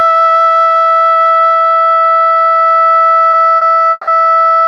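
At 3.31 s and again at 3.57 s the music hangs for a moment, a short stall from a late packet: the jitter buffer ran dry and the last sound was stretched by 20 ms, then 40 ms, with a faint buzz. Playback resumes exactly where it paused, so nothing is skipped, unlike a dropout.

From 3.91 to 4.10 s comes a longer call audio freeze, likely caused by packets held up in transit. The held sound fades as a buzz for 160 ms, briefly reaching silence for about 10 ms, before resuming. That fade toward silence and the greater length set it apart from the brief stalls.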